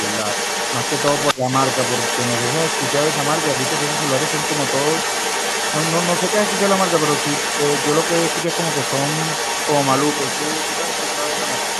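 An echo canceller at a loudspeaker end likely failed to remove its own playback, so a delayed copy of the speech runs underneath from start to finish, trailing the original by 233 ms and sitting only a few decibels below it, which gives a doubled, smeared sound. At 1.33 to 1.45 s, speech suppressed in double talk likely occurs as the canceller mistakes overlapping speech for echo and turns it down. The speech dips sharply, by roughly 15 dB at its deepest, for about a tenth of a second.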